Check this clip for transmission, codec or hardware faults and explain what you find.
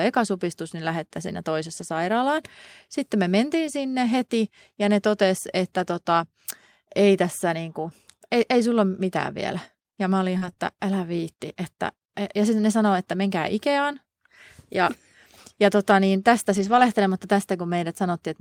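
Yes, there are transmission faults: two spots where lost packets were rebuilt from error correction, and a stretch of scattered short gaps.

Lost packet rebuilt from error correction, at 1.77 to 1.83 s right after "ekasupistus niin lähettä siinä", and again at 16.52 to 16.82 s after "ja tota niin tästä". There's no dropout. Instead about 40 ms in the first spot and 160 ms in the second turn briefly rough and noisy. That points to lost packets (a couple in the first case, more in the second) being replaced by the low-bitrate backup copies carried in the following packets, the way Opus in-band error correction works. The decoder plays those coarser copies, so the sound keeps flowing but loses detail for that moment.

Scattered short gaps, from 7.83 to 10.58 s, between "ei tässä niin" and "älä viitti että ja". In this span there are about three tiny holes, the longest around 40 ms, adding up to 80 ms of missing audio. 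The receiver filled each one by stretching the last bit of sound forward, so you don't hear silence, just little ticks or smeared hiccups. They fit a few packets arriving late or getting lost one at a time.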